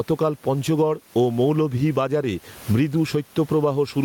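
Throughout the speech, the room noise, about 36 dB below it, swells between phrases and ducks under each loud sound, swinging around 15 dB. This is gain pumping, likely from excessive input gain with a fast limiter clamping down.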